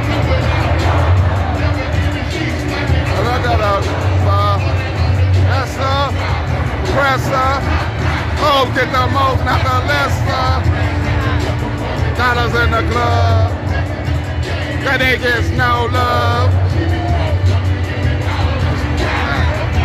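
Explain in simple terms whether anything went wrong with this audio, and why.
Nothing went wrong with this audio, because there is no fault to be heard in it.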